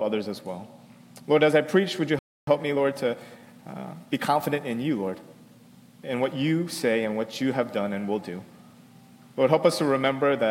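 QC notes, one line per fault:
2.19–2.47 s, playback stall: the sound cuts out mid-flow and goes silent for about 0.28 s before carrying on. That gap most likely comes from the player running dry or its thread getting blocked, so nothing reached the output until it recovered.
2.47–5.31 s, time-compressed catch-up: right after the gap everything runs hurried, at about 1.1x speed but normal pitch. The player is working off its backlog by snipping out small pieces and cross-fading the joins until it's back on schedule.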